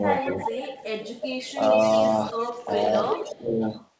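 From 0.17 to 1.54 s, then 1.75 to 2.14 s and 2.4 to 2.7 s, an echo leak returns a copy of the speech about 370 ms late, roughly 10 to 15 dB below it. The likely cause is a far-end echo canceller failing to remove its loudspeaker pickup. At 3.09 to 3.39 s the echo rises to only about 5 dB down. From 3.24 to 3.62 s the speech is suppressed in double talk, dipping by up to about 15 dB. The canceller likely turned down the talker along with the echo. A faint echo, roughly 30 dB down, recurs from 3.62 to 3.87 s.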